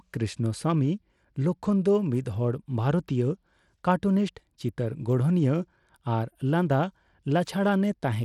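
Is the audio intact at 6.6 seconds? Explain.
No, Bluetooth SBC compression is audible at 6.6 s, as it is throughout the speech, likely from a starved bit pool fitting roughly 96 kbps. Weak upper sub-bands get almost no bits, so treble flickers, nothing reaches above 17 kHz, and gritty quantisation noise rides on everything.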